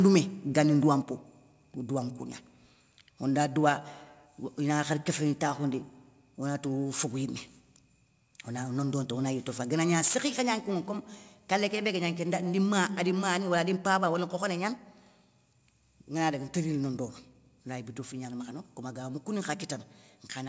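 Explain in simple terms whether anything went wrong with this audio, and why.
Microphone overload, from 10.03 to 10.15 s: the loudest moment turns harsh and crackly. The microphone level was likely set too high, so the peaks of the sound went past what the recorder can capture and their tops were sliced flat.

Microphone volume stepped down, at 10.08 s: in the middle of that distorted burst, the voice and the background both suddenly get quieter in a single step. The call software, reacting to the overload, probably turned the microphone's input level down to stop the crackling.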